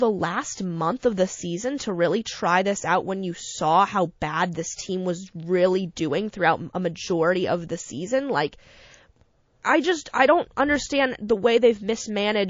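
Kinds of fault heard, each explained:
MP3 compression: The whole clip sounds watery and swirly, with faint detail flickering in and out. That's plainly audible codec damage, likely from MP3 encoding at a low bitrate, which fits something around 32 kbps.
Pre-echo: A short hiss creeps in just before a sharp attack because quantisation noise gets spread across the whole transform block. It happens at 1.00, 1.14 and 10.09 s, lasting about 30 to 43 ms and rising roughly 12 to 18 dB, which points to long blocks with no short-block switching.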